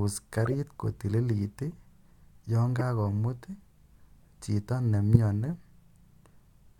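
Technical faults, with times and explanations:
0.45–0.54 s, corrupt frame decoded: a short burst of squeaky noise, around -25 dBFS at peak. Flipped bits in a few consecutive compressed frames got played anyway, so misread codes and gains threw energy into the wrong bands for those frames.
1.71–1.73 s, corrupt frame decoded: a faint blip, only about -40 dBFS, from a few damaged frames.
2.79–2.81 s, corrupt frame decoded: a chirp near -20 dBFS across a couple of frames.
5.14–5.17 s, corrupt frame decoded: the loudest one, about -10 dBFS, a single bad frame.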